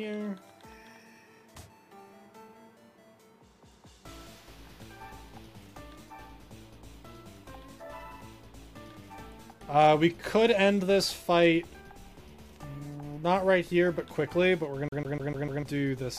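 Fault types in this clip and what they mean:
Hard clipping: Peaks pushed past what a stage can pass are cut flat, adding high harmonics. The overload is only about 1 dB, from 11.37 to 11.47 s, so it is a brief crackle on the loudest moment rather than a sustained fuzz.
CD stuck on one turn: A scratch sends the laser back one track each revolution, so a 149 ms slice repeats five times from 14.89 to 15.63 s, with a short mute at each jump. The even, rapid rhythm sets it apart from irregular dropout stutter.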